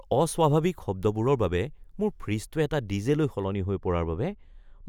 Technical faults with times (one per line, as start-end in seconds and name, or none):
3.44-4.88 de-emphasis applied wrongly